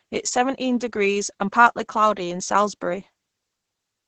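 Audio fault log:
Throughout: Opus voice compression, heavy. The speech is coded by the SILK linear-prediction mode at around 10 kbps, with a coarse excitation that leaves it muffled, hoarse and slightly robotic. A spectrogram shows a flat ceiling with nothing above 9 kHz and smeared, blotchy harmonics.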